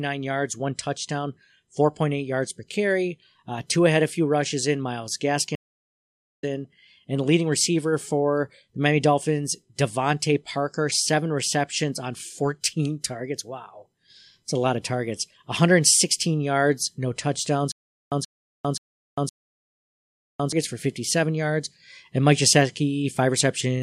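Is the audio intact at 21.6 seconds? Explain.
Yes, at 21.6 seconds the speech plays through intact, with no dropout, click, distortion or other fault at that point.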